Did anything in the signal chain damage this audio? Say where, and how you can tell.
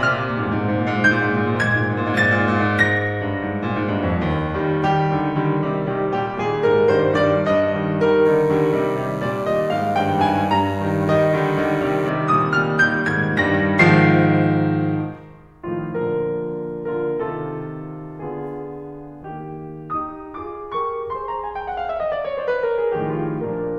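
Yes. DECT cordless phone buzz runs from 8.25 s to 12.10 s, an analogue-wiring fault: a thin, steady buzz sits roughly 30 dB under the music, pitched at 100 Hz and bright with harmonics. That repeat rate is the giveaway. A nearby DECT handset or base transmits a brief radio burst every 10 ms, and the audio circuit rectified that RF, turning each burst into an audible click train that fused into a buzz.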